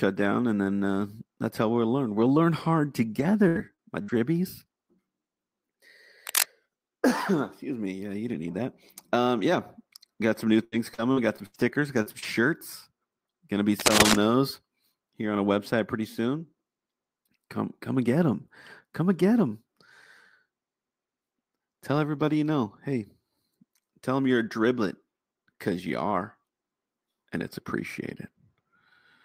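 Repeated packet loss (robotic sound) hits this speech recording from 3.19 to 4.16 s and again from 10.64 to 12.24 s: short dropouts, the longest about 74 and 79 ms, are patched by stretching the preceding sound, leaving it choppy with fragments missing. Cable scratch noise appears from 6.27 to 6.43 s and 13.79 to 14.15 s as dense, uneven rustling bursts, roughly 5 dB louder than the speech, likely from a worn cable or connector being moved.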